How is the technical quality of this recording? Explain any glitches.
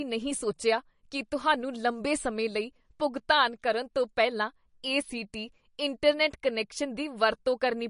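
Quality is noticeably degraded by compression. Likely MP3 compression, throughout: a bit-starved encoder cuts treble at 10.6 kHz and drops weak detail frame to frame, so the speech sounds watery and swirly.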